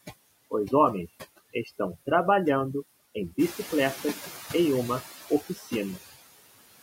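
A noise reduction stage set far too aggressively runs through the whole clip, pulling individual frequency bands down or off wherever they sit near its noise estimate. This overdone noise removal takes quiet parts of the speech with it, leaving a lowered background broken up into twinkling specks.

Across the full length, the noise suppressor also adjusts each band frame by frame, cutting what it treats as steady noise by about 17 dB. These noise suppressor artifacts make the residual noise sink in the gaps between phrases and swell back up beneath the speech.

Around 3.5 s the room noise, part of the recording itself, jumps by about 10 dB and settles about 15 dB below the speech. The suppressor's noise estimate lags behind this jump, so from 3.38 s to 5.01 s the suppressor is catching up. At first it cuts the louder noise by only about 8 dB, and then it adapts over roughly 1.6 s until the noise sinks again.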